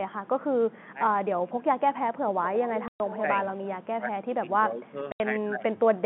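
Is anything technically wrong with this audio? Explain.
Yes. Three kinds of fault sit on top of a narrowband telephone line, G.711-coded, whose band tops out at about 3.5 kHz.

Speech suppressed in double talk: at 1.44–1.64 s, 3.98–4.96 s and 5.33–5.91 s the level sags by about 15 to 20 dB. This is likely an echo canceller ducking both talkers at once.

Echo leak: from 2.43 to 3.21 s, a copy of the sound trails by 180 ms, about 10 dB down. The canceller likely let loudspeaker pickup through. It adds a repeat rather than removing sound.

Packet loss filled with silence: gaps of 120 ms at 2.88–3.0 s and 80 ms at 5.12–5.2 s, consistent with 20 ms packets. These are dead-silent holes with hard edges.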